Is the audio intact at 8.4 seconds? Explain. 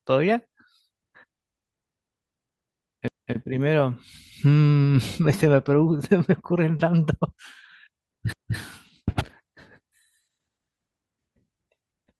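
No. From 8.33 to 8.58 s the speech has an overlapping chunks fault. The audio was handled in 5-second chunks, and the next chunk began 250 ms too early. That quarter-second plays twice at the join, so the speech stutters and repeats.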